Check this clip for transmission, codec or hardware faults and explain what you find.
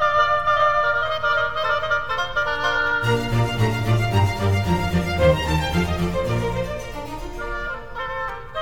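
One fault stands out: a doubled audio track, already present when the music begins and ending abruptly at 2.92 s. An equally loud, full-band copy trails about half a second behind with no decay, likely from a second, slower capture path. Every onset repeats, so the waveform and spectrogram show each transient twice, evenly spaced.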